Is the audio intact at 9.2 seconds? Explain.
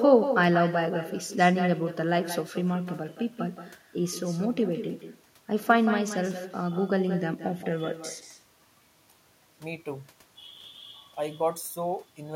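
No. At 9.2 seconds, as throughout the clip, every stretch of speech is trailed by a quieter, thinner copy arriving about a fifth of a second later, roughly 10 dB below the original. This is echo with no canceller: the far end plays the call over a loudspeaker, its microphone captures that playback, and nothing strips it out, so the talker's own voice returns after the network round trip.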